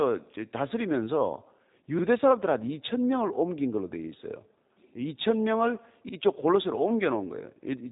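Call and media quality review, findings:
G.729 codec throughout: plainly audible rough, synthetic speech from an 8 kbit/s model-based rebuild. The spectrogram is blank above 3.8 kHz across the whole file.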